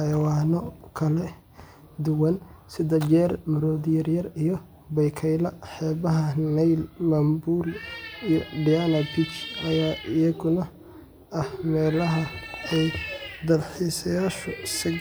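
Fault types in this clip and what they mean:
There are no fault types in this clip.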